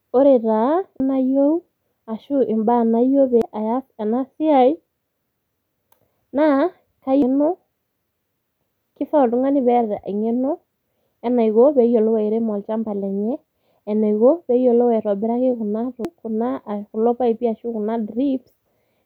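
At 1.0, 3.42 (between "ashu mbaa nayieu" and "aas ena siai"), 7.22 and 16.05 s the speech is broken by brief chirps, squawks, clicks or short holes from damaged data in a compressed stream. At each point corrupted bytes made the decoder misread a frame and hunt for the next valid header.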